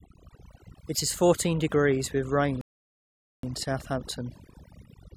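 From the first second the speech carries overdone noise removal. A noise reducer set far too aggressively has pulled individual frequency bands down toward nothing wherever they sat close to its noise estimate, and the softer parts of the voice were caught too. The background falls to an unnatural near-silence speckled with small twinkling tones. Unlike low-bitrate codec smearing, the damage follows how quiet each band is, so it tracks the level of the sound rather than its complexity.

Right after "fourteen degrees with rain", at 2.61 s, comes a rebuffering stall. Playback ran out of downloaded audio and froze until more arrived, so the sound cuts to silence until 3.43 s, adding about 0.82 s. It then resumes exactly where it left off. That is what separates it from a dropout or a lost packet: no speech is missing across the gap, and the pause only stretches the timeline.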